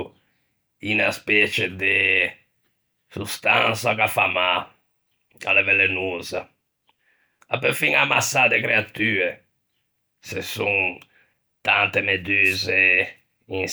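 Near the end, from 12.44 to 12.58 s, the radio link of an analogue FM wireless microphone briefly fades as reflected signals cancel the direct one at the receiver, producing a wireless microphone noise hit. With the carrier weakened, receiver noise climbs. For roughly 0.14 s a quick swish of static is heard before the signal recovers.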